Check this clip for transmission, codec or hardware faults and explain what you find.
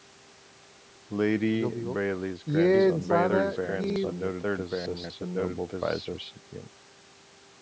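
Two faults are present: chunks out of order and a doubled audio track.

At 0.84–0.96 s, 3.84–3.96 s and 4.86–5.1 s, the speech briefly jumbles. These are chunks out of order: 60 ms blocks played late, by one chunk in the first two cases and three chunks in the last. Nothing is lost, but the misordered segments leave hard joins.

From 2.74 s to 6.16 s, a second copy of the speech runs about a second behind the original at roughly equal loudness. It has no decay or room colour, and it cuts in and out abruptly at those times. This doubled audio track is likely caused by the same signal being captured again by a slower path, or by an edit holding two out-of-step copies. The call's microphone processing, with nothing above 8 kHz, sits beneath both faults.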